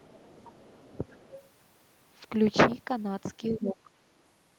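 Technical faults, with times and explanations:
0.0–0.24 s, 0.42–0.81 s and 1.05–1.4 s: other side's voice leaking through. A faint second voice sits beneath the talker. It grows from about 30 dB below the speech in the first stretch to about 20 dB below by the third. This is likely the far end's loudspeaker audio that incomplete echo cancellation left in the microphone signal.
0.1–0.4 s, 0.81–0.95 s and 3.38–3.9 s: speech suppressed in double talk. The talker's level dips by up to about 15 dB in the first two stretches and about 10 dB in the last. This is likely because the echo canceller, hearing both sides at once, turned down its own talker along with the echo.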